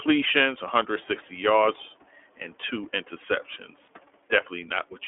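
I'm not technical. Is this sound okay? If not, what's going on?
No. The whole clip passes through the iLBC codec, a phone-line compressor that removes everything above about 3.4 kHz, so the speech sounds muffled, slightly rough and synthetic. Between 3.86 and 3.89 s, lost iLBC frames cause a brief buzzy, held sound where one 20 ms packet went missing. The speech recovers immediately afterward. The room noise that comes up around 1 second is part of the original recording, not a system fault.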